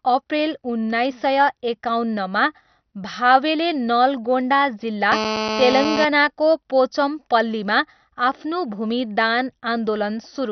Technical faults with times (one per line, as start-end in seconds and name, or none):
0.00-10.52 MP2 compression
5.12-6.05 GSM phone buzz